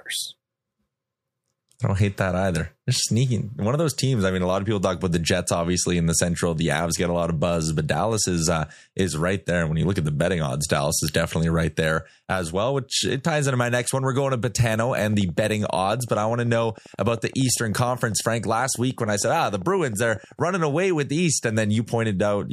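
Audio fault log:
14.74–20.40 s, train of clicks: A steady ticking runs over the speech for almost six seconds. The clicks arrive about 12.7 times per second, evenly spaced, around seventy in all. Each has much the same sharp shape. Their peaks reach roughly the level of the speech itself. They carry on through the pauses as well. A regular pulse like this is likely interference from nearby equipment or a faulty connection or power supply.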